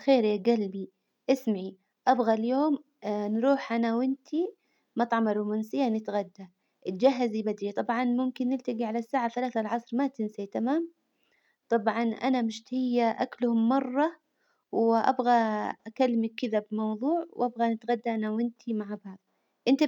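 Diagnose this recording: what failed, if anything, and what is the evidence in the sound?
Clock slip clicks from 0.1 to 19.87 s: a faint, evenly spaced rattle about every 30 ms, likely two unsynchronised converter clocks slipping single samples. Unlike buffer dropouts, there are no gaps.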